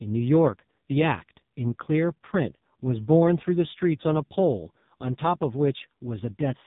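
From start to finish the speech has that AMR narrowband mobile codec sound, cut off above 3.8 kHz, heavily buzzy and synthetic, which fits a very low mode near 5 kbps.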